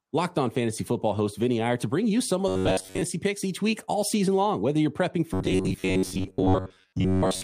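From 2.48 to 3.03 s, between "to bring you some" and "picks each week all", and again from 5.34 s after "you're prepping" to the end, the speech collapses into robotic sound from repeated short buffers. Most of the real audio is skipped, and a slice of roughly 10.7 ms is looped, likely because fresh audio arrived too seldom. That loop imposes a rigid metallic buzz at 93.8 Hz that roughly tracks the phrasing. Unlike a dropout or stutter, there are no gaps, only a fixed-rate buzz.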